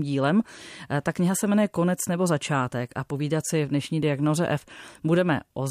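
No technical faults can be heard anywhere in the recording. The speech runs without any audible disturbance at any point.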